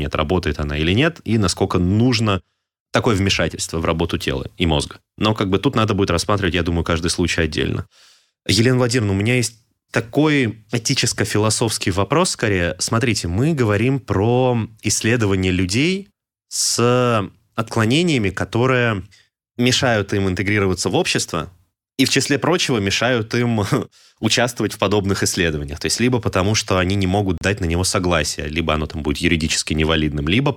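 A gap at a join of encoded pieces cuts into this speech recording from 27.38 to 27.41 s, a silence of about 35 ms with smeared edges. Separately encoded segments were spliced untrimmed, leaving encoder start delay and final-frame padding in place before the speech resumes.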